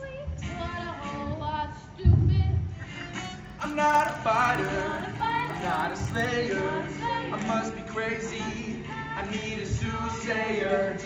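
Resampler restarted on every block, from 3.1 to 6.25 s: the converter was reset at each block rather than carrying its history across, leaving a small error at every edge. The result is a steady 20 Hz ticking, fitting 50 ms blocks, present only with signal.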